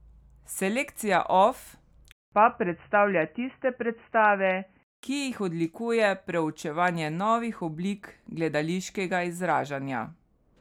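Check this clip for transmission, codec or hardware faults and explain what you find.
One fault in this speech clip: from 2.12 to 5.03 s the input likely switched to a poorer device. There's a 200 ms gap at the switch, then nothing above 3 kHz, so it turns dull and boxy over a faint new hiss at about the same level, before clearing up again.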